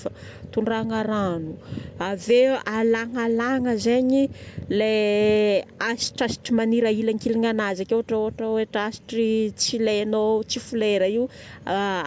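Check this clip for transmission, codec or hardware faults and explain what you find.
No transmission or hardware faults.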